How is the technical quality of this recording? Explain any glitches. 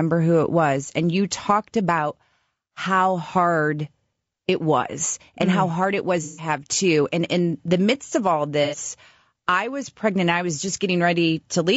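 The speech carries audible codec damage for the whole clip, and there are two short dropouts where lost data was patched over.

Throughout, the voice sounds rough and grainy, with noise filling the gaps between harmonics and a thin, synthetic-sounding top band. This is likely low-delay AAC compression, AAC-ELD as used in video calls. Its short frames resolve pitch harmonics coarsely and need more bits, so at a rate that fits roughly 32 kbps the encoder cannot code the harmonic detail cleanly and leaves plainly audible damage.

The first AAC frame loss with concealment comes right after "how mm hard it", from 6.23 to 6.49 s, with about 150 ms of audio missing. The decoder rebuilt the gap from the last good spectrum with altered phase or interpolated energy. The result is a smeared, noisy, phasey patch instead of clear speech. The length fits five frames of about 30 ms each.

The second frame loss follows "the midst of all", from 8.63 to 8.77 s, covering about 90 ms. 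The same concealment fills it, producing a shorter smeared, noisy blur. Its length fits three lost frames.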